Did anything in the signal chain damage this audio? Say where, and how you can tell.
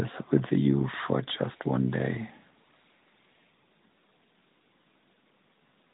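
No, nothing in the chain damaged this speech; it went through an AMR narrowband mobile codec at 12.2 kbps, which caps the band at 4 kHz as designed and shows only the light coding expected at that rate.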